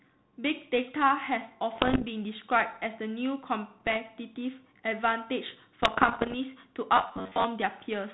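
Bit errors on an ADPCM link hit the speech from 1.75 to 2.07 s, from 3.80 to 3.96 s, and from 5.82 to 6.37 s. A small fraction of bits flip, around 1.5 percent in the outer bursts and 0.7 percent in the middle one. Each error throws off the decoder's step size and prediction, so the damage rings on briefly. The result is pops, rough bursts and quick jumps in level. The middle burst is lighter. Between bursts, the 32 kbit/s G.726 path carries only light coding roughness.

From 6.97 to 7.44 s the speech turns into a rigid, metallic buzz at about 94 Hz. This is robotic sound, likely from repeated short buffers. A slice of roughly 11 ms seems to be replayed, and about half the real audio is skipped.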